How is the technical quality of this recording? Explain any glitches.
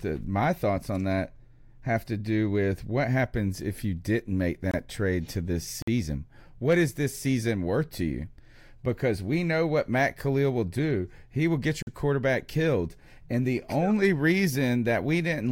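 Three brief dropouts interrupt the speech, each a block of digital silence. At 4.71 s there's a 23 ms gap, which fits a 1024-sample buffer. At 5.82 s there's a 52 ms gap, and at 11.82 s a 46 ms one, which fits a 2048-sample block. Each time, the buffer likely wasn't filled in time and zeros went out instead. The hard cut in and out leaves a tiny hole.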